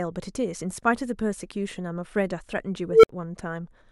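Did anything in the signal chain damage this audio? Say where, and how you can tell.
Yes. At 2.87 s an unstable filter in the processing stage produces a tone of around 500 Hz that swells over about 160 ms, clips, then drops to 60 ms of silence ending at 3.09 s. A recursive filter with bad coefficients grew until its output overflowed and reset.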